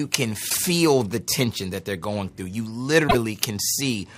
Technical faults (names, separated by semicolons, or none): broken MP3 bit reservoir